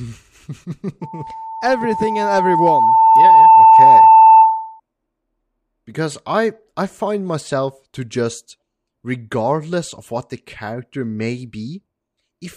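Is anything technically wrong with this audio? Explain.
Yes. From 1.02 s to 4.80 s the speech is overrun by loudspeaker feedback squeal: a steady tone at 889 Hz swells over roughly two seconds until it sits around 15 dB above the speech. A microphone is picking up the loudspeaker it drives, and at this frequency the round trip returns more energy than it started with. The tone therefore keeps reinforcing itself until it stops at 4.80 s.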